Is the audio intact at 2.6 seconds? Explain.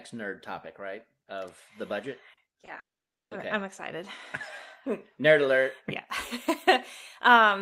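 No. At 2.6 seconds the speech sits inside a burst of repeated packet loss from 2.33 to 2.69 s. Four gaps, the longest 40 ms, were patched by stretching the preceding sound. About 28 percent of that span is concealed, so it sounds choppy and robotic.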